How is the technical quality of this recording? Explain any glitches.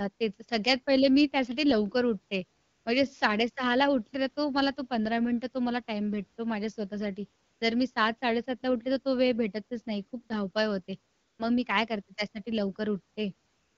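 The main glitch is AMR comfort noise kicking in during four pauses. The wideband phone coding underneath sounds clear, which fits the 12.65 kbit/s mode.

AMR comfort noise shows up at 2.61 to 2.85 s, 7.43 to 7.61 s, 11.13 to 11.39 s, and from 13.49 s to the end, each gap 180 to 290 ms long. The sending phone decided nobody was talking and stopped sending speech frames, so the receiver painted in synthetic noise from a rough sketch of the background's level and spectrum. You hear the real room tone swap for a smooth, even hiss that switches in and out.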